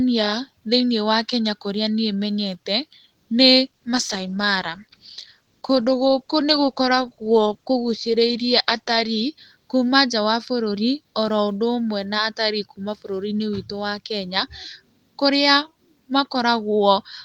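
From 3.66 s to 9.33 s there is a call bitrate drop. The bandwidth estimate fell and the encoder coded far more coarsely for about 5.6 s, consistent with a fall from 32 to 14 kbps. The speech turns muffled and watery. A spectrogram shows the high-frequency band cut away and a smeared, blotchy texture until the rate recovers.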